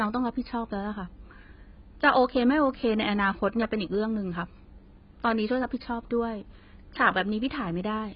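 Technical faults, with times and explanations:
Throughout, AAC compression: the speech stops dead at 5 kHz and sounds dull and smeared, likely heavy AAC-LC coding consistent with a bitrate near 16 kbps.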